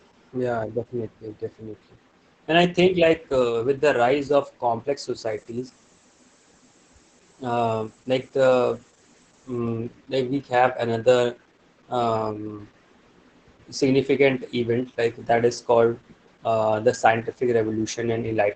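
Speech with Opus voice compression throughout. Nothing reaches above about 8.6 kHz, so the voice sounds muffled. The SILK coder's coarse excitation makes it hoarse and slightly robotic. Such heavy damage points to a bitrate near 10 kbps.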